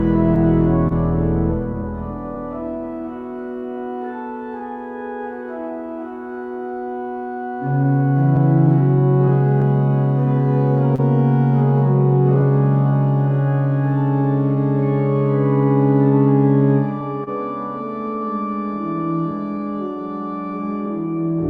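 Clock drift between sender and receiver runs through the whole clip. The sender's clock is roughly 2 percent slow against the receiver's, so the jitter buffer keeps draining. The receiver has to keep adjusting, which leaves small, irregularly spaced timing hiccups across the audio.

A short stall from a late packet comes at 0.88 to 0.93 s. A packet arrived about 25 ms late and the buffer ran dry, so the receiver held the last sound for 25 ms before resuming where it stopped. Nothing is lost, but that moment is briefly drawn out with a faint buzzy dip.

Repeated timing corrections follow from 1.73 to 21.06 s as the receiver compensates for the slow sender. Playback runs at 98 percent speed, with short stretches repeated to pad the stream, adding roughly 0.3 s overall. Each correction is small.

Scattered short gaps fall between 7.07 and 12.44 s. About five packets arrived late at separate moments, and each hole was bridged by continuing the preceding sound. 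The longest fill is around 30 ms and the total is about 70 ms, so they register only as brief ticks or smears.

A second short stall from a late packet occurs at 17.24 to 17.29 s. This time the delay is 29 ms, held and then resumed without loss, producing the same momentary drag and slight dip.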